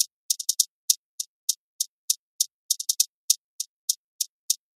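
Nothing in the sound stood out as a technical problem on listening.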